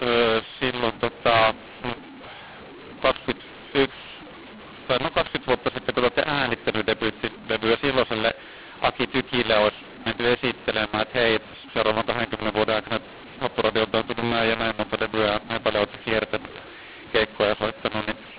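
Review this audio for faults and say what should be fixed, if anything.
The speech was encoded with G.711 A-law but decoded as mu-law, a mu-law and A-law mix-up that runs throughout the clip. Because the two laws map the same 8-bit codes to different levels, loudness is scrambled: some samples land too loud, others too quiet, and the quietest are pushed well above silence. The speech comes out harsh and distorted, and the pauses fill with noise instead of going quiet. The 4 kHz telephone band itself sounds as expected for G.711. To prevent it, signal the codec law explicitly between encoder and decoder and check that both ends agree.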